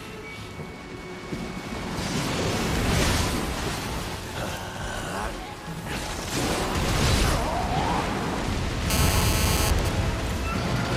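From 8.90 to 9.70 s a hard, raspy GSM phone buzz sits on the sound at about 2 dB below the signal level. Its fundamental is 216.7 Hz with a dense stack of harmonics, and it bears no relation to the audio. A 2G phone in a call was transmitting its time-slot bursts nearby, and the audio circuitry rectified each radio pulse. The 217 Hz repetition rate and its buzzy, square edge set it apart from 50 or 60 Hz mains hum, which is smoother and lower.

Immediately after, from 9.79 to 10.63 s, come GSM signalling bursts, roughly 10 dB below the signal. These are even 217 Hz ticks with a longer buzz twice a second, from a phone in a call but with its user silent, so it sends only sparse groups of bursts. That grouped, rhythmic cadence at a fixed rate distinguishes it from random clicks or crackle.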